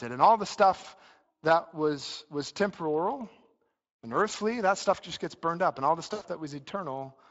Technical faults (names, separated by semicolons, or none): Speex codec; VoIP packet loss concealed by the speech codec